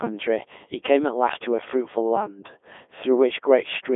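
From start to finish the speech has gone through a Codec 2 vocoder, probably its 3.2 kbit/s mode: resynthesised from sine waves, so it's robotic, buzzy and dead above 3.8 kHz.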